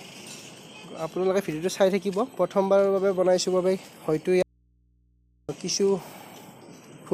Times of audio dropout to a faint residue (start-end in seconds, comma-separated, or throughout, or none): 4.42-5.49